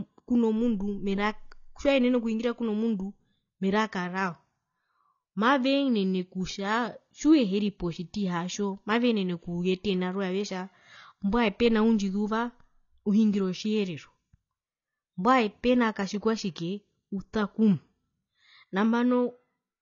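Throughout this speech recording the sound is dull and smeared, with nothing above 7 kHz and a warbling, fizzy texture on sustained vowels and sibilants. The likely cause is AAC compression at a low rate, consistent with AAC-LC at around 24 kbps.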